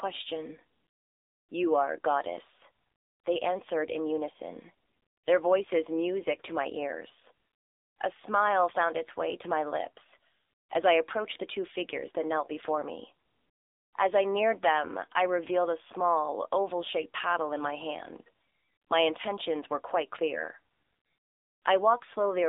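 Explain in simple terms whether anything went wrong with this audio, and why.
Yes, something went wrong. The whole clip passed through the AMR narrowband mobile codec, the old phone-call codec. Nothing above 3.7 kHz or below 300 Hz survives, so the speech sounds thin and muffled. The squeezing is plainly audible, giving the voice a buzzy, synthetic edge.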